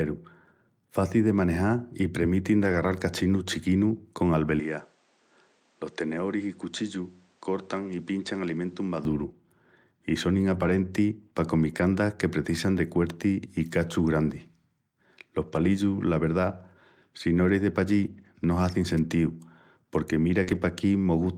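From 2.59 to 3.01 s, a run of lost packets was rebuilt from error correction. Each missing packet's low-bitrate copy, carried in the packet that followed, was decoded in its place, so about 220 ms of speech plays without a gap but sounds rougher and grainier, with the top end dipping where the decoder had to estimate the highest frequencies.

Between 4.60 and 9.05 s, the input likely switched to a poorer device. There is no silence at the change, but the band suddenly stops at about 9.3 kHz, so the speech turns duller and more boxed-in. The level drops by roughly 5 dB, and a new noise floor appears around 35 dB below the speech. The fuller sound returns at 9.05 s.

The lost packet rebuilt from error correction recurs at 10.53–10.79 s (about 140 ms), 11.73–11.83 s (60 ms), 14.33–14.35 s (20 ms, a single packet's worth), 15.47–15.65 s (100 ms) and 18.05–18.27 s (120 ms). Each is a brief patch of coarser, noisier texture with softened highs.

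At 20.43–20.49 s, a short concealed packet loss left about 40 ms that never arrived in time. The receiver extended the preceding sound for about 34 ms and then blended back, giving a quick smear or wobble. Overlapping it, from 20.47 to 20.61 s, another 80 ms is rebuilt from error correction, so the roughness carries on slightly past the smear.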